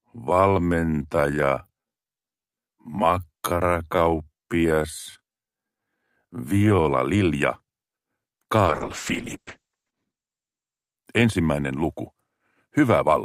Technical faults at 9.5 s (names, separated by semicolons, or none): call bitrate drop